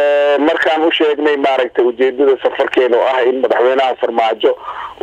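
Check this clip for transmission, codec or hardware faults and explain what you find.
No transmission, codec or hardware faults can be heard anywhere in the recording, so the signal reaches the listener intact.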